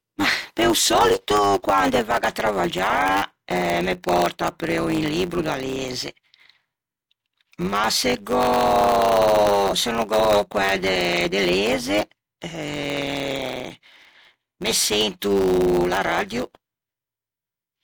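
From the very start and right through to the end, this speech has a block size mismatch (truncated). One stage hands over blocks, likely 512 samples each, but the next stage reads a bit less than that and drops the tail of every block. You get a steady buzz at 100 Hz from those regular chops, and the talking runs about 1.07 times fast while the timbre stays the same.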